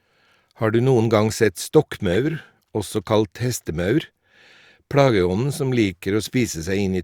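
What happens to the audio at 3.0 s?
Nothing goes wrong at 3.0 s; the speech there is intact.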